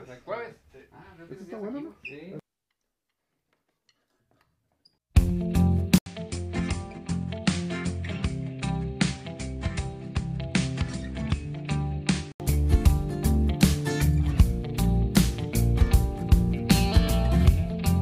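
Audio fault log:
5.98–12.40 s, likely an input switched to a poorer device: an 80 ms gap opens at 5.98 s, then the sound returns duller and boxier, with nothing above 9.6 kHz, a level drop of roughly 10 dB and a faint new noise floor well below the signal. A different microphone or headset profile would impose its own narrower band, gain and self-noise. At 12.40 s the original fuller, brighter input comes back.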